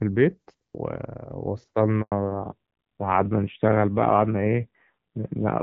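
At 2.02 s the call switches from one network to another, and for about 100 ms, until 2.12 s, no speech frames reach the receiver. This handover gap makes the speech fade out within a few tens of milliseconds and leaves a short hole of silence. Whatever was said in that tenth of a second is simply gone, so the talker seems to skip a fragment.

When the new link comes up at 2.12 s, it carries a narrowband codec instead of HD Voice. This fallback to narrowband removes everything above 4 kHz for the rest of the clip. The speech loses its crisp sibilants and airy top end, and sounds muffled and gritty. Before the switch the wideband codec sounds clean, which fits a rate of around 12.65 kbit/s. After it, the rougher texture points to a low-rate AMR narrowband mode, near 5.9 kbit/s.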